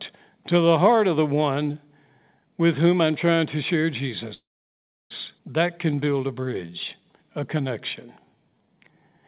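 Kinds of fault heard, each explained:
Call audio freeze: from 4.34 to 5.12 s, just after "I'm trying to share", the speech stops, a brief fading tail gives way to about 0.68 s of silence, then resumes where it left off with nothing lost; likely packets held up in transit emptied the jitter buffer.
Jitter buffer slow-down: from 5.63 to 9.22 s the speech drags at about 90% speed with unchanged pitch, sounds stretched out. The receiver repeated single pitch periods and slices of pauses to rebuild its reserve, adding 377 ms.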